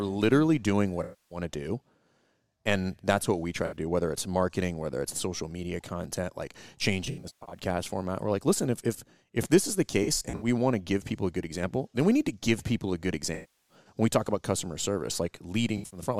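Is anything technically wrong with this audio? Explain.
Yes. There is AAC frame loss with concealment at 1.03–1.38 s, 3.65–3.76 s, 7.04–7.59 s, 9.91–10.47 s, 13.34–13.75 s and 15.77–16.01 s. Compressed frames went missing, and the decoder patched each gap from the last good spectrum. Gaps run from 64 ms to 341 ms. The ones near 7.0 s, 9.9 s and 15.8 s are broken up, in runs of about 150 ms or less. Short patches sound smeared, noisy or phasey, while longer ones fade toward a very faint noise floor and then fade back in.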